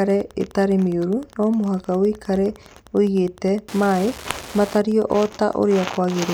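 Wi-Fi interference runs throughout this speech clip: a nearby radio's beacon, rectified by the audio circuit, ticks every 102.4 ms, roughly 25 dB below the speech.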